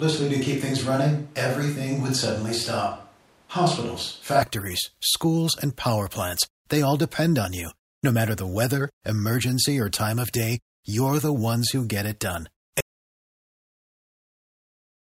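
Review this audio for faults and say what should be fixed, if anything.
From 0 to 4.43 s there is a switch to a distant microphone: speech is roomy, hollow and thin, at similar level, until the close sound returns before "schools and power plants". The likely cause is a failed close microphone. Monitor the close microphone continuously during recording.

An audio dropout to silence runs from 12.81 s to the end, after "who get it done". The input was likely lost while recording continued. Secure connections and check input meters throughout.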